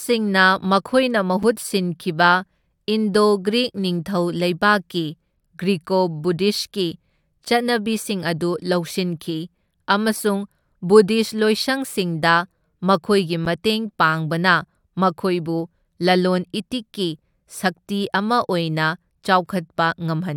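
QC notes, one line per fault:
1.43, 7.45, 13.45 and 19.46 s: gap between stream segments. Short silent holes of about 4 to 9 ms with hard edges cut into the speech every 6 s, including between "ꯅꯤꯡꯊꯧ ꯂꯩꯕꯥꯛꯀꯤ ꯒ꯭ꯔꯤꯀꯣ ꯕꯨꯙꯤꯁꯠꯀꯤ" and "ꯆꯠꯅꯕꯤꯁꯤꯡ ꯑꯗꯨ ꯂꯧꯁꯤꯟꯈꯤ ꯑꯃꯁꯨꯡ". Adjacent segment timestamps don't meet, so the player fills the space with silence. No audio is lost.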